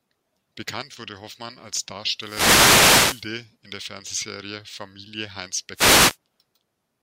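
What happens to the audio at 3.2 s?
At 3.2 s you're near the tail of a wireless microphone noise hit that runs from about 2.18 to 3.32 s. The radio link fades as reflected signals cancel each other out, so receiver noise swells up as a swishy burst of static over the speech before the signal recovers.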